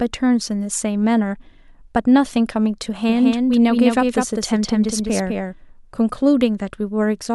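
It's a speech clip with a doubled audio track from 3.09 to 5.53 s: a dry copy roughly 5 dB down trails about a fifth of a second behind, likely from a second, slower capture path.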